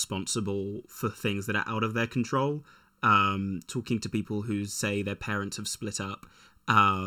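Throughout the speech, channel delay (comb filtering) is present: one channel lags by under a millisecond, so the mono sum cancels periodically from around 700 Hz, sounding hollow and phasey.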